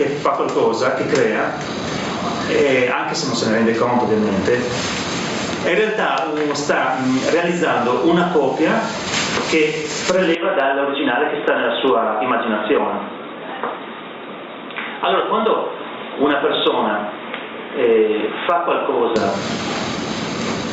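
From start to finish the gain pumps, with a swing of roughly 20 dB, so loud and soft passages sit unnaturally close in level and the whole sound feels squashed. This gain pumping is likely caused by the input gain being set far too high, with a fast limiter or compressor clamping down on every loud moment and releasing in between.

At 10.35 s the tone changes abruptly with no gap. The sound turns dull and boxy, drops by around 5 dB, and loses everything above 3.8 kHz, well short of the 8 kHz the call path otherwise carries. A faint new noise floor sits far below the signal. The sound clears again at 19.16 s. This is the mark of an input switched to a poorer device, likely a fallback microphone or a headset's narrowband call profile taking over mid-recording.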